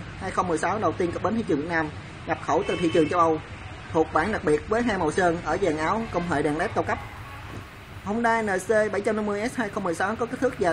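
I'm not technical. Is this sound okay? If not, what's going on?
No. For the first 6 seconds this is an adaptive stream starting at a low bitrate. The player began with a small, lower-quality version of the audio so playback could start quickly, and switched to a better version once it had gauged the connection. Until 6.0 s the sound is dull, with nothing above about 9.7 kHz, and compression artefacts are more noticeable. At 6.0 s it abruptly becomes clearer and fuller, with no gap.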